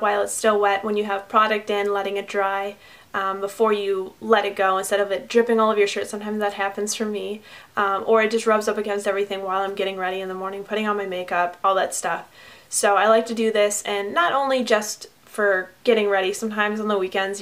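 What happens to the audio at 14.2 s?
Nothing goes wrong at 14.2 s; the audio plays through that moment intact, with no dropout, click, distortion or other fault.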